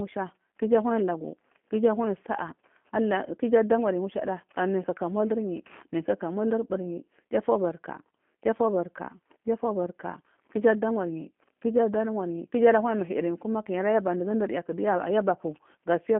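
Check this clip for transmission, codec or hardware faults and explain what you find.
One codec fault is present, and it lasts the whole clip: G.729 codec coding. The speech passed through a low-rate codec that rebuilds each short frame from a vocal-tract filter, a pitch predictor and a few pulses. This fits an 8 kbit/s G.729A stream on a 200 Hz to 3.4 kHz telephone line. Nothing above 3.4 kHz survives, so the speech sounds band-limited and plainly rough, buzzy and synthetic.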